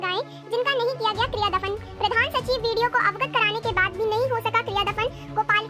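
Throughout, the audio is being played back faster than it was captured, with no rate conversion. The ratio fits material recorded at about 22 kHz and played at 32 kHz. This wrong sample rate makes everything run about 1.45 times faster and sound roughly 6.5 semitones higher.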